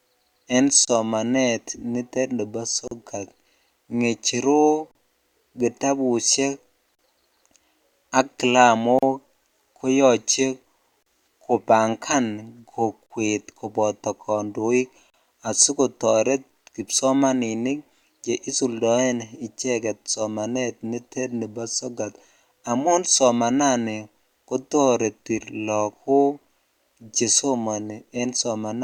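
Gaps at joins of encoded pieces break the speech at 0.85, 2.88 (after "nitet nibo"), 4.91, 6.95, 8.99, 11.03, 13.06 and 15.10 s (after "koboto kondoik"). They recur every 2 s. Each is a dropout, 26 ms first, then 38 ms. Untrimmed encoder delay and end padding cause them.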